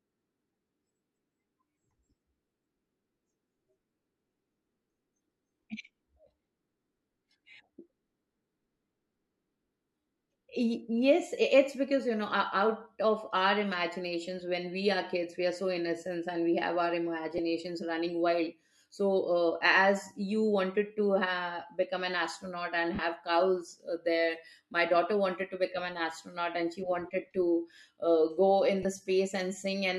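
Lost LE Audio frames break up this speech clip three times: at 17.38 s just after "we have our", briefly for about 10 ms; at 22.95 to 22.99 s for about 40 ms; and at 28.83 to 28.85 s after "go in" for about 20 ms. The durations fit one, four and two 10 ms frames going missing over the Bluetooth link. The LC3 decoder covers each gap by replaying the last spectrum with scrambled signs, so the voice turns briefly into a noisy smear. The light lossy compression on the clip plays no part in these breaks.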